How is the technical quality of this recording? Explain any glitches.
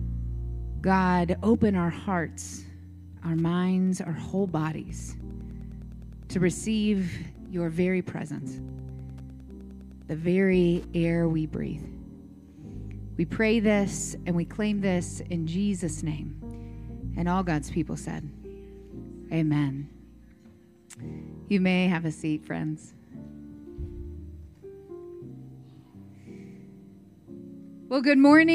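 One fault stands out: Wi-Fi interference from 3.23 s to 11.23 s. A nearby Wi-Fi radio's beacon, repeating every 102.4 ms, is rectified by the audio circuit, producing steady ticking about ten times a second, sitting roughly 35 dB below the main sound.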